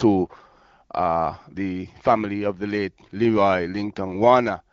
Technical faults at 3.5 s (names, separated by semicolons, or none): none